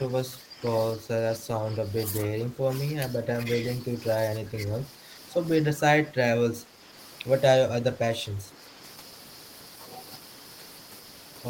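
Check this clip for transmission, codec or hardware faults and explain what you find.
One fault recurs: speech suppressed in double talk, at 0.0–0.62, 0.95–3.46, 3.8–5.07, 5.75–6.93 and 7.67–8.6 s. The speech sinks by about 5 to 15 dB in patches. The likely cause is an echo canceller treating overlapping far-end talk as echo and attenuating everything. The waveform shows abrupt troughs in the envelope, and the spectrogram shows matching faded stretches across the band.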